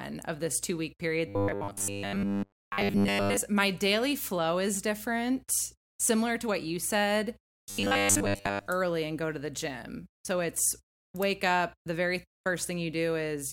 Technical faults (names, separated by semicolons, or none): robotic sound from repeated short buffers